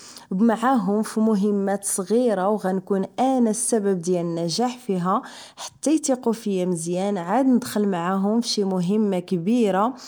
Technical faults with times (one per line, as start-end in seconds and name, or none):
none